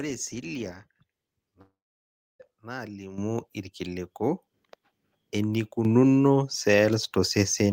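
From 1.61 to 2.41 s there is a long network dropout: roughly 0.8 s of audio is lost, likely because packets stopped arriving. The receiver briefly extends the last sound as a fading buzz or hiss, then about 0.67 s of near-silence follows before the audio resumes with the gap missing.

At 3.18 s the microphone volume is stepped up by about 10 dB, and at 5.85 s by about a further 7 dB. Each is a single abrupt jump in which the speech and the background noise rise together, as the input gain is raised.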